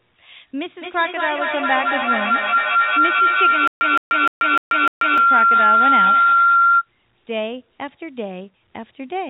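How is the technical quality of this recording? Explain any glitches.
The recording has two clear problems, and they overlap in the middle.

From 0.82 s to 6.88 s there's a feedback howl. Two devices in the same room on the call form a loop from microphone to loudspeaker and back, and each pass adds gain. The repeats grow and narrow onto one tone near 1.5 kHz. It peaks about 8 dB above the speech and pulses roughly every fifth of a second, which matches the loop's delay.

From 3.68 s to 5.18 s there's a stutter with silent gaps. A 165 ms fragment repeats five times. Each repeat is followed by about 135 ms of dead digital silence, so the burst comes back every 300 ms or so. The likely cause is the stream stalling and replaying its last chunk on each retry. The audio that should have filled that span is gone. The call path itself runs as expected, with nothing above 4 kHz.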